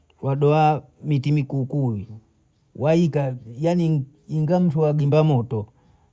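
No technical faults are audible.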